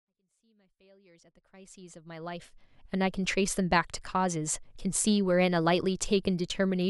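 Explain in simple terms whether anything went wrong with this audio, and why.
Nothing went wrong here: the speech rises gently in level from the very beginning until about 2.96 s, a smooth fade-in like one an editor would add, and beyond that deliberate-sounding ramp the signal shows no technical problem.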